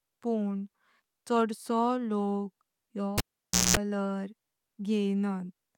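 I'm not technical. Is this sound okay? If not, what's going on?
No. At 3.18 s a cable is pulled and plugged in: a pop, half a second of silence, 60 Hz mains buzz as the plug touches, then another pop at 3.77 s.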